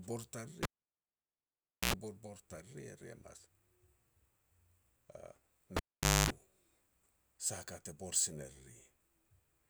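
At 0.63 s a cable gets pulled and plugged in: a pop, about 1.26 s of near silence, an 85 ms burst of 60 Hz buzz as the tip touches, then a pop as the speech returns. It happens again at 5.77 s, with a 0.49 s dropout and 0.25 s of 50 Hz buzz.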